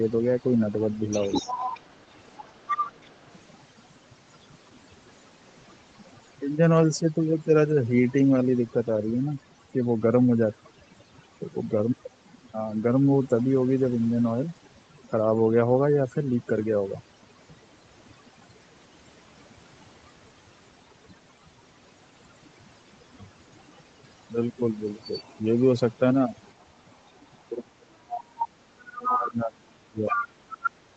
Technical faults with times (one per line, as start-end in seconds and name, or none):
0.00-30.96 overdone noise removal
0.02-3.10 other side's voice leaking through
1.42-1.52 speech suppressed in double talk
25.02-25.30 other side's voice leaking through
26.52-27.11 other side's voice leaking through
27.63-30.23 speech suppressed in double talk
28.38-30.71 other side's voice leaking through